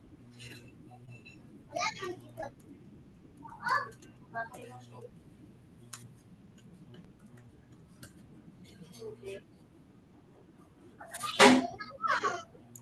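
At 1.05 s and again at 2.41 s there are short concealed packet losses: about 20 ms of the call failed to arrive each time, and the receiver extended the preceding sound and blended back, leaving a brief smear or wobble lasting roughly 36 ms and 31 ms. Unlike a dropout, no silence opens up.

At 7.05 s a DC step shifts the waveform's zero line and the offset holds to the end. It is heard as a single low thump while the speech continues unchanged, which separates it from a click caused by damaged samples.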